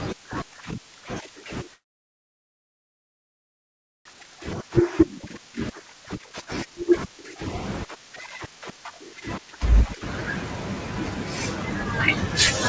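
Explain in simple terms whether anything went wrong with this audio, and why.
Three kinds of fault affect this speech, all typical of an internet call.

From 1.74 to 4.07 s the speech stops and the line goes silent for over two seconds, with only a brief trace of sound carried on at the start. This is a call audio freeze, most likely caused by packets getting stuck on the way so the receiving end had nothing to play. Nothing is lost: when the audio returns it resumes exactly where it paused. That is what separates a freeze from a dropout. The speech is simply pushed later.

At about 4.13 to 4.15 s there is a skip ahead. Playback jumps forward with almost no gap, and roughly a second and a half of speech is gone, with the two sides stitched together directly. Unlike the freeze, there is no pause here. Material goes missing instead. That speech was dropped while later audio was already waiting.

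From 4.22 to 7.36 s, and again from 7.85 to 9.96 s, the speech sounds hurried. This is jitter buffer speed-up. To shrink the leftover delay, the receiver cut out many tiny slivers of sound, making the first stretch run about 16% faster (roughly half a second removed) and the second about 8% faster (roughly a fifth of a second). The pitch stays the same, which tells it apart from a tape being played too fast. The delivery just feels rushed.

The dull top end, with nothing above 8 kHz, comes from the call codec.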